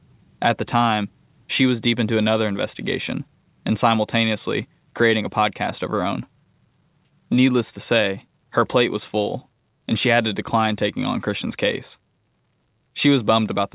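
Listening to the speech in this recording, nothing stood out as a technical fault.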